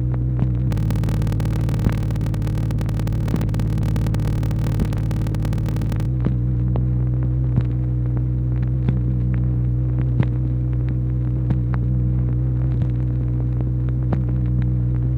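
From about 0.67 to 6.06 s there's a block size mismatch (padded): the audio buzzes at 38.3 Hz and drags at 0.889 times normal speed, which fits 1024-sample blocks zero-padded out to larger reads, leaving a gap in each.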